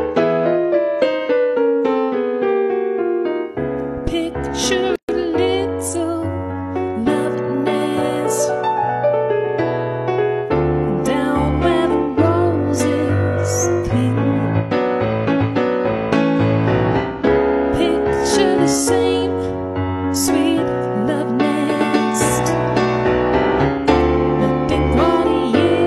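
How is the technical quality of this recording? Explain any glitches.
There is one glitch. From 4.96 to 5.09 s the sound drops into a gap of about 131 ms with smeared edges, then resumes where it stopped. This is a gap at a join of encoded pieces: separately encoded segments were spliced without trimming each run's start delay and last-frame padding.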